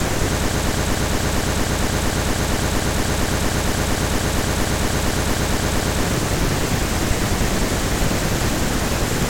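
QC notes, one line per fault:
0.51–6.03 s, broken-record loop: a 231 ms fragment of speech repeats exactly, back to back, 24 times, giving a rapid mechanical stutter for about five and a half seconds. Likely a stalled player or stream resending its last buffered fragment, so the intended speech there is lost.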